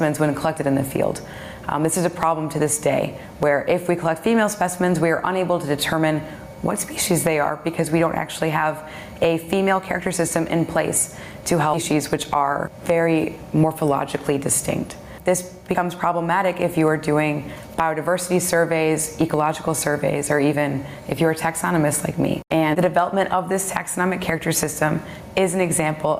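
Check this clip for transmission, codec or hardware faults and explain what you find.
Three faults stand out, with the trouble clustered around the 12-second mark.

Gain pumping runs the whole way through. The level keeps swelling in the quieter gaps and ducking under each loud sound, by about 15 dB. That's most likely input gain set way too high with a fast limiter or compressor clamping down, leaving everything squashed.

At 11.73 to 11.75 s there's a skip ahead. Playback jumps forward with no fill, so roughly a second of audio is simply gone and the two sides butt together. That fits the receiver throwing away a backlog of late audio to cut the delay.

From 11.93 to 13.44 s you get a jitter buffer speed-up. The audio runs at 110% speed at an unchanged pitch, so it sounds hurried. The receiver is trimming short pitch-period chunks, about 150 ms in total, to drain the excess buffered audio.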